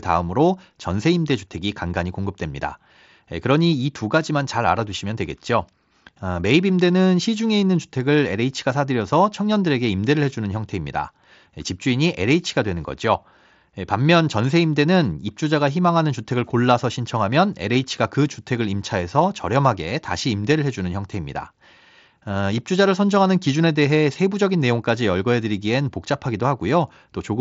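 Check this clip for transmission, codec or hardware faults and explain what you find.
No transmission or hardware faults.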